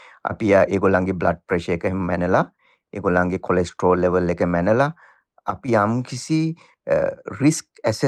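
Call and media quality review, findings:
No audible transport, device or processing faults were found, and the signal's level and continuity show nothing needing a ticket.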